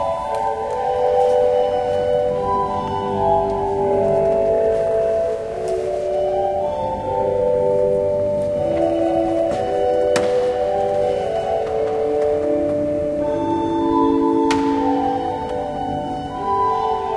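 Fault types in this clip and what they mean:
No faults can be heard anywhere in this audio.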